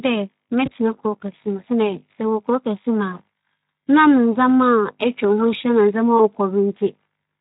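A short speech clip with two brief hiccups from VoIP packet loss concealed by the speech codec, at 0.65–0.74 s and again at 6.17–6.25 s. Each time roughly one 20 ms frame went missing, and the decoder filled the gap by extending the last pitch and filter with falling gain, so you hear a short stretched smear that sags and takes a moment to recover. The light Speex colouring underneath fits a bitrate of around 15 kbps.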